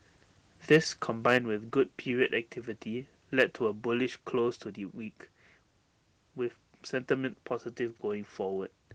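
A harsh, crackling edge breaks up the loudest syllables at 0.72 to 0.77 s and again at 1.28 to 1.37 s, with peaks pushed about 2 to 3 dB past the converter's limit. This is likely microphone overload: input volume set too high, so the converter flattens the tops of those peaks. At 1.38 s, right after the second burst, voice and background drop together by about 4 dB. That sudden step is likely the microphone volume being stepped down by the call software reacting to the clipping. The same crackle returns at 3.39 to 3.43 s, about 3 dB over, and at 4.71 s a smaller step down of about 1 dB follows.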